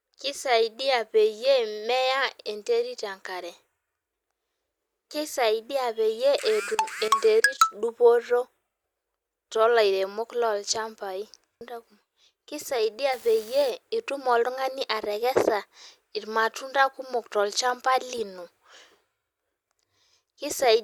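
A speech recording with a burst of crackle from 13.12 to 13.70 s. The fault is an unreliable data bit. One line carrying a single bit of each sample is marginal, so that bit flips in a random share of samples. Every flip adds a spike of the same fixed size, here about -31 dBFS. Scattered across the half-second, these spikes form a steady fizz that sits on top of the speech.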